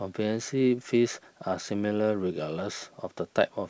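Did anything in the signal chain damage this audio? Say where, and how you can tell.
No, nothing in the signal chain damaged this audio; the G.722 call path at 64 kbps simply leaves nothing above 8 kHz.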